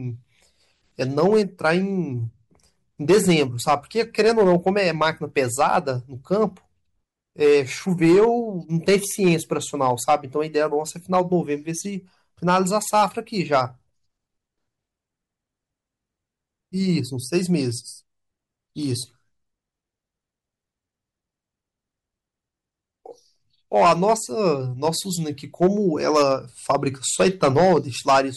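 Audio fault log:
Throughout: hard clipping. The speech is driven about 8 dB past what the signal path can carry, so its peaks are cut flat. Only a small share of samples, around one and a half percent, hit the ceiling. Those flattened tops add high harmonics, heard as harsh crackle on louder syllables.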